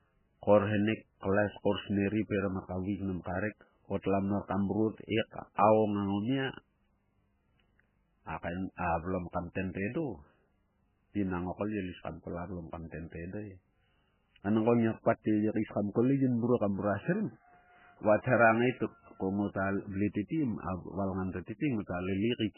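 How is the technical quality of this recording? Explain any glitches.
Quality is poor throughout. The audio was likely squeezed by heavy MP3 compression, at a rate consistent with about 8 kbps. Starved of bits, the encoder drops everything above 3 kHz and switches weak frequency components on and off, so the speech sounds muffled, watery and swirly, with smeared onsets.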